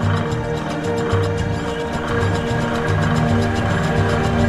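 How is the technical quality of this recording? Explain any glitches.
The recording has one clear fault. From 2.09 s to the end, a doubled audio track appears. A second copy trails about 0.7 s behind, roughly as loud, starting abruptly. Likely a slower second capture path or misaligned edit.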